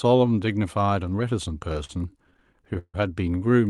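From 1.73 to 2.96 s, repeated stalls (stutter) occur. The jitter buffer kept running dry, so the last sound was stretched, once up to 150 ms. The speech drags and stutters, but nothing is lost.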